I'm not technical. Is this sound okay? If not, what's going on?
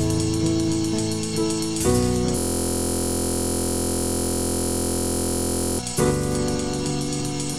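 No. From 2.38 to 5.79 s there's a system hang loop: the computer froze while one 23 ms sliver of audio repeated exactly, making a steady 43 Hz buzz rather than silence or choppy skipping.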